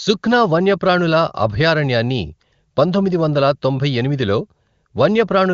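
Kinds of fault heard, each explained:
No faults can be heard.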